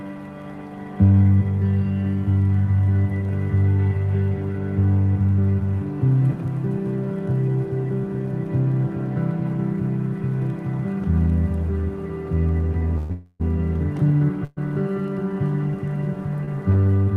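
The sound halts three times in quick succession, with the last sound held on as a fading buzz or hiss: from 12.98 to 13.12 s, from 13.12 to 13.42 s (which ends in a near-silent dip of about 10 ms), and from 14.44 to 14.59 s. These are call audio freezes, likely caused by packets held up in transit that drained the jitter buffer. Each time, the audio resumes exactly where it stopped, so nothing is lost, but about 0.12 s, 0.28 s and 0.13 s of delay are added. At 16.45 to 16.49 s, a sound is briefly stretched with a slight buzz or dip for about 27 ms. This is a short stall from a late packet: the receiver held the last sound until the overdue packet arrived, then carried on with nothing missing.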